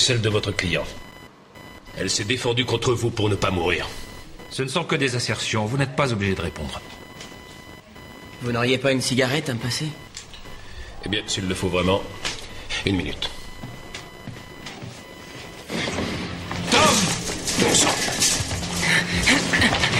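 From 0.30 s to the end, a thin whining buzz sits roughly 20 dB below the sound, pulsing at around 1 kHz. This is computer activity noise: processor or graphics load swings disturb the ground shared with the audio circuit, injecting interference that follows the machine's activity.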